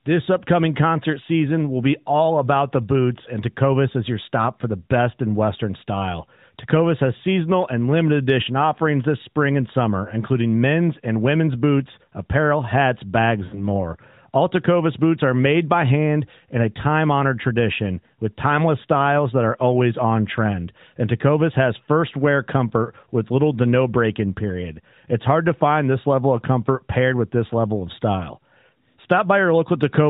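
At 13.46 to 13.65 s, just after "boots apparel hats bags", lost AMR speech frames cause a smeared, fading stretch. About 60 ms of narrowband speech goes missing, which fits three lost 20 ms frames. The decoder repeats the last pitch and tone with falling level, so the sound drags briefly, then returns weak.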